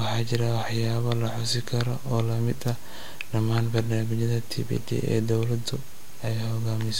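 Speech, and nothing is technically wrong with it.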